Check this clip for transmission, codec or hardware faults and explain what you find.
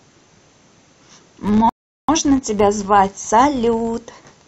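Two faults are present in this speech clip.

Throughout, a filter restarted on every block produces a steady 100 Hz buzz, which fits 10 ms blocks. Each block starts from silence, so the filter's transient repeats. Unlike mains hum, the buzz rises and falls with the speech level.

From 1.69 to 2.09 s there is a rebuffering stall. Playback ran out of buffered audio and went silent for about 0.39 s, then resumed exactly where it stopped. Unlike a dropout, no sound is missing, but extra time is added.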